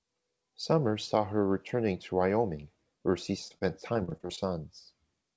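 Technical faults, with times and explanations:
3.48–4.39 s, repeated packet loss (robotic sound): just after "where she", nine short gaps, the longest 29 ms, lose about 180 ms of sound; each is patched by extending the preceding audio, so about a fifth of this stretch turns choppy, with fragments missing.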